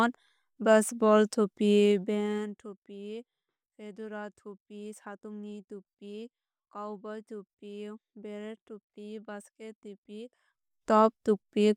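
From 1.77 s to 2.79 s, a fast ticking, zipping texture rides on the speech as its level drops by roughly 20 dB. This is zipper noise: the gain was lowered in discrete 1 dB jumps, around fifteen per second, rather than as a continuous ramp. Each unsmoothed jump puts a tiny discontinuity into the waveform, and the rapid series of clicks fuses into the zipping sound.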